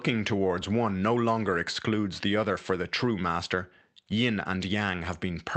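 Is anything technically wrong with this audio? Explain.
No, nothing is technically wrong with this audio.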